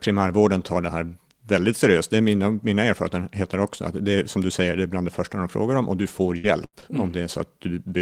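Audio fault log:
5.43–7.40 s, scattered short gaps: just after "är bland det första", about three brief dropouts in the speech, the longest around 70 ms, each patched by extending the preceding sound, leaving small ticks and smears over roughly 7% of the span, consistent with lost or late packets.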